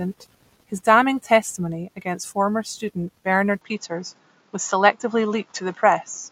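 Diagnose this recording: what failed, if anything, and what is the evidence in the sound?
An input switched to a poorer device at 3.61 s, running to the end of the clip: the speech abruptly loses everything above 7.3 kHz, shifts level by around 5 dB and gains a faint new noise floor, with no gap at the change. This likely points to the capture stage selecting a different, narrower-band microphone.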